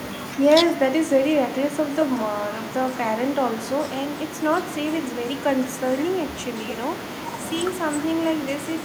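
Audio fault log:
No faults heard in this speech recording.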